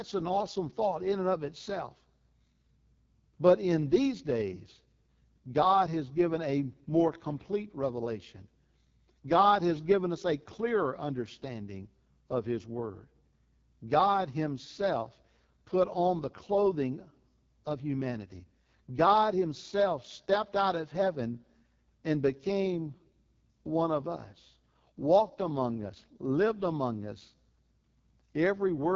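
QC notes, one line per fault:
Throughout, AMR wideband (HD Voice) codec: the speech is squeezed through a pulse-driven vocal tract model at its lowest rate, which fits the 6.6 kbit/s mode. Heavy coding damage leaves the speech rough and raspy, with nothing above about 7.5 kHz.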